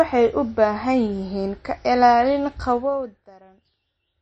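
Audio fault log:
throughout MP3 compression: nothing above 8.3 kHz and a watery, swirling quality on the speech, which points to a low bitrate, likely around 32 kbps, unlike a plain low-pass filter.
2.72–3.36 s zipper noise: level drops about 25 dB in coarse 2 dB steps, roughly thirty per second, each step ticking audibly, unlike a smooth fader move.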